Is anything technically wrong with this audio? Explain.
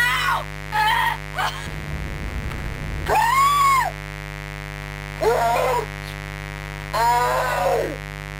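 Yes. Mains buzz runs the whole way through: switching spikes on 50 Hz mains throw harmonics up into the kilohertz range, giving a steady raspy buzz only about 10 dB under the sound.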